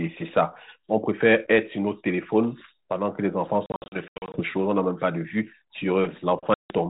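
Packet loss on the ADPCM call hits twice, at 3.66 to 4.40 s in scattered bursts and at 6.54 to 6.78 s. Each leaves hard silent holes, then slightly distorted speech while the decoder's predictor catches up.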